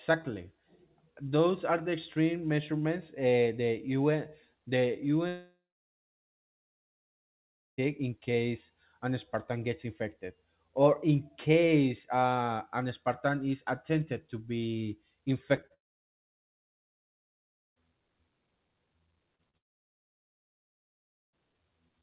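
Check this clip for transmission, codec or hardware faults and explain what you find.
The clip shows two kinds of transmission fault: long network dropouts, where sound stops and then resumes, and short concealed packet losses, where brief gaps are papered over.

Long network dropout, 5.28–7.80 s, 15.74–17.78 s and 19.57–21.35 s: Each time, the sound gives way to a short fading buzz as the receiver extends the last audio it had, then goes silent for about 2.15 s, 1.98 s and 1.74 s respectively. The likely cause is that no packets arrived over those stretches, so the missing sound is simply absent. After the first gap, the audio picks up again at "in case an".

Short concealed packet loss, 15.56–15.59 s, 15.61–15.65 s, 15.67–15.72 s, 19.36–19.41 s and 19.51–19.55 s: Each of these is a hole of 20 to 40 ms of missing audio. The decoder fills it by continuing the preceding pitch or noise and then blends back into the real signal, which is heard as a brief smear or wobble. 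The first three follow "is attempted to be" and run straight into the second dropout. The last two come just ahead of the third dropout. The narrowband sound, with nothing above 4 kHz, fits a 64 kbps G.711 A-law call path.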